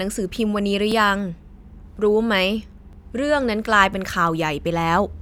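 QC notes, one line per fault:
0.92, 1.92, 2.93, 3.94 s: overlapping chunks. Speech is processed in 1.0 s chunks, each starting about 7 ms before the last ended, so that sliver plays twice at every join. The result is a regular, once-per-second tick or stutter, not the silent gap of a dropout.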